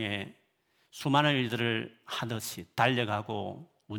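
Nothing goes wrong in this bit of speech; there are no technical faults to point out anywhere in it.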